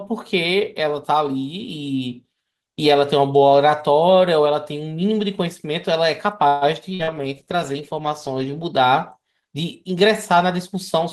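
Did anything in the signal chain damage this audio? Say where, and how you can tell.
Yes, and all of it clusters in the network and jitter-buffer stages of a call, between 6.47 s and 8.75 s.

Call audio freeze, network stage: from 6.47 to 6.64 s the last sound is stretched into a fading buzz or hiss for about 140 ms. Then the sound picks up exactly where it stopped. This is likely packets held up in transit, draining the jitter buffer. A spectrogram shows smeared, flattened harmonics and no hard silence.

Skip ahead, jitter buffer: at 6.89 to 6.93 s playback jumps forward, dropping roughly 70 ms with only a tiny fill. Audio was dropped in transit or discarded by the buffer while later audio was already waiting. The waveform shows two unrelated segments butted together, with a visible discontinuity.

Call bitrate drop, codec stage: from 6.91 to 8.75 s the encoder falls from 32 to 15 kbps and stays at the floor for about 1.7 s. 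The sound goes coarse and muffled. A spectrogram shows the upper band thinning and blocky, smeared detail until the bitrate recovers.

Burst of packet loss, network: at 6.94 to 7.02 s about 80 ms is lost. A gap of roughly 48 ms is filled by a decaying continuation of the preceding sound, and then the audio resumes further on. The waveform shows an envelope sagging toward zero, and the spectrogram a frozen, fading harmonic block.

Short concealed packet loss, network: at 7.03 to 7.10 s another 40 ms fails to arrive and is patched with about 42 ms of extrapolated sound. It is heard as a brief smear. On a spectrogram it appears as a short patch of slightly blurred, over-regular harmonics.

Jitter buffer slow-down: from 7.14 to 8.39 s the receiver repeats pitch periods, adding about 94 ms so playback runs at 93% speed at unchanged pitch. Sounds drag slightly. The spectrogram shows stretched segments with steady formants, and the waveform shows repeated identical cycles.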